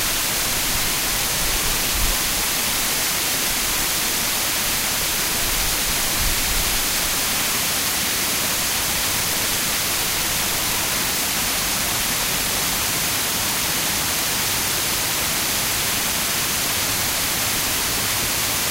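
No technical faults can be heard anywhere in this recording of sounds. Nothing in it needs a time marker or any further comment.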